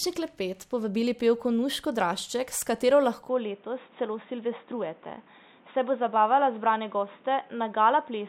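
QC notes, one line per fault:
3.29 to 8.28 s, input switched to a poorer device: the speech abruptly turns dull and boxy with no gap and no clear level jump, likely from the input moving to a narrower-band microphone. On a spectrogram, everything above 3.8 kHz vanishes at 3.29 s, and a new noise floor appears roughly 30 dB below the speech.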